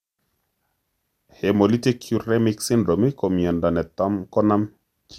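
A speech recording that was likely pushed through an MP2 encoder around ten times over, which fits a 128 kbit/s chain, leaving generation loss throughout: each re-encode adds fresh quantisation noise, so the sound turns swirly and hollow, consonant attacks smear, and nothing survives above 16.7 kHz.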